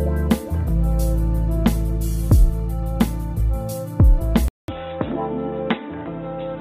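At 4.48 s the sound cuts out for about 200 ms, then returns about 10 dB quieter, dull and boxy, with nothing above 3.8 kHz and a new background noise roughly 30 dB below the signal. This persists to the end. The likely cause is an input switched to a poorer device, such as another microphone or a headset's call profile, whose narrower band, lower level and own noise floor replace the original path's character.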